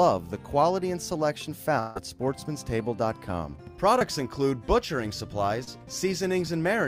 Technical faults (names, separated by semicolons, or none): long network dropout; short concealed packet loss